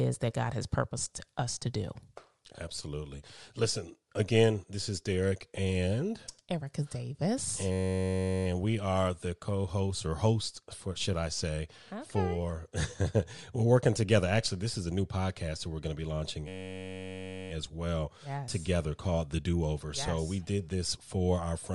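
A speech recording carrying a steady breathy, grainy edge with a hazy, noise-filled top end, most likely from Bluetooth LC3 compression. The upper spectrum sounds thinned and replaced with noise, which fits a 48 kbps LC3 bitrate on 10 ms frames. The damage is a constant graininess over the whole clip. Twice the sound freezes into a system hang loop: from 7.72 to 8.46 s, just before "we are the co", and from 16.48 to 17.50 s, between "going to be launching" and "as well yes together". Each time, one 10.67 ms slice repeats exactly, producing a steady buzz at about 94 Hz, which fits a 512-sample ring buffer cycling while the system stalled. Speech resumes where it stopped, so nothing seems to be skipped. That rigid, identical repetition separates it from a dropout-and-conceal event, which would vary or fade instead of droning. At 20.07 s, just before "we did this for", a single lost LE Audio frame leaves a 10 ms noisy smear. 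The decoder refilled the gap from the previous spectrum with scrambled phase, so the sound briefly turns rough rather than going silent or clicking. This sets it apart from a plain dropout, and its brevity keeps it from the fade-out a longer loss would bring.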